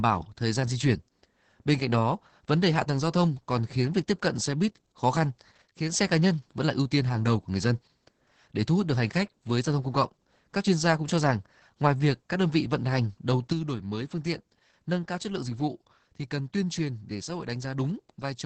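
Opus voice compression runs throughout. At 10 kbps in SILK wideband mode, the band stops near 8 kHz and the coarse excitation makes the speech hoarse and slightly robotic, steadily rather than in bursts.

From 5.62 to 5.92 s, just after "xe buýt khó khăn" and before "xe cá nhân vẫn", the level drops abruptly by about 6 dB. It drops again from 13.52 s, after "vị vận hành đầu", until the end. This is likely one channel dropping out. The timbre is unchanged, unlike a fade or filter.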